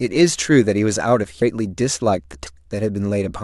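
At 2.46 s the speech jumps forward with compressed frames skipped. Roughly a third of a second of audio is simply never played, because a run of coded frames was either absent from the stream or rejected by the decoder as corrupt. The gap fits about ten frames of 26.1 ms each. Since adjacent frames overlap, the join comes out as a short smeared blip rather than a sharp click.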